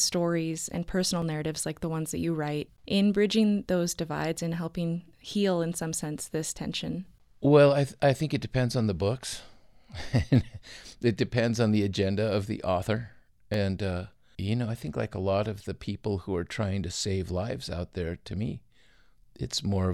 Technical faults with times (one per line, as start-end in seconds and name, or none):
1.22 underrun with held sample
13.54 underrun with held sample